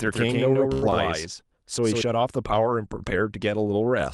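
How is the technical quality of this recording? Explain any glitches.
The recording has three glitches, all in the first two seconds of the speech.

Doubled audio track, from the start to 2.01 s: a second full-band copy trails around 150 ms behind, about 5 dB quieter and dry, likely from a slower capture path, then drops out abruptly.

Short stall from a late packet, 0.73 to 0.84 s: the jitter buffer ran dry, so the last sound is held for 89 ms before resuming where it left off.

Short concealed packet loss, 0.90 to 0.93 s: about 40 ms never arrived. A brief fill continues the preceding sound and the timeline jumps roughly 30 ms ahead, giving a quick smear or wobble.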